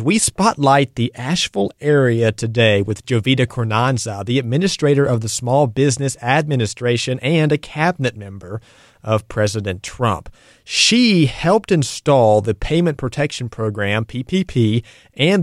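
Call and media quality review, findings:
Electrical switching spike at 9.88 s: sharp snap over the speech, peaking around -15 dBFS. Likely a nearby switch or motor arcing, picked up on the audio line.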